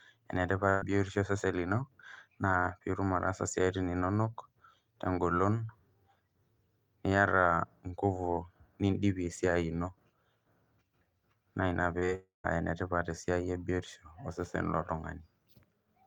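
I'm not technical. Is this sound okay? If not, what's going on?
No, there are three kinds of problem.

At 0.69 to 0.83 s there is a burst of packet loss. About 120 ms of speech never arrived. The receiver stretched the last sound to cover the hole, so you hear a brief held buzz or hiss. Then speech jumps ahead.

At 11.99 to 12.04 s and again at 12.06 to 12.10 s there is short concealed packet loss. Each time about 20 ms went missing. The gap was patched over. It sounds like a quick smear or wobble, and a tiny bit of speech can vanish.

At 12.15 to 12.46 s the sound cuts out, most likely from a long network dropout. About 300 ms of speech is lost. The last sound is dragged out and fades, leaving silence for about 150 ms. Then speech returns, with that part gone.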